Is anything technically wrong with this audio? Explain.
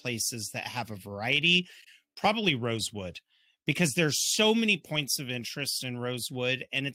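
No, nothing technically wrong can be heard in this speech recording. No fault shows up anywhere in the clip that would need explaining.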